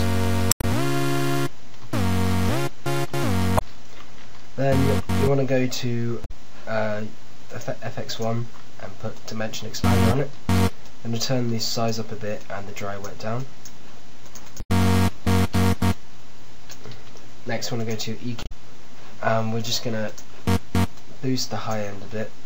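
Five spots show damaged data in a compressed stream: 0.49 to 0.64 s, 3.55 to 3.62 s, 6.22 to 6.31 s, 14.58 to 14.70 s and 18.43 to 18.52 s, each under a fifth of a second. At each one, part of the compressed data got mangled, so the decoder misread or dropped those frames and had to hunt for the next valid header before the audio picked up again. What you hear is a brief chirp, squawk, click or gap.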